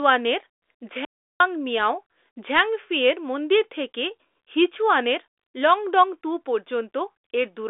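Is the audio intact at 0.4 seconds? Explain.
Yes, at 0.4 seconds the speech is intact, with nothing there beyond the narrow telephone band of the G.726 ADPCM path.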